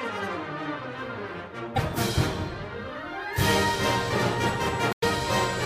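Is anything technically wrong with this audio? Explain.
Yes, there's damaged data in the compressed stream, and it hits twice: a short burst from about 1.76 to 1.78 s, and a longer one from 4.90 to 5.04 s. Some bytes in those stretches got corrupted, so the decoder misreads or throws out those frames, loses sync, and hunts for the next valid frame header before it can carry on. You hear it as a chirp, squawk, click or short hole, with the second one lasting longer.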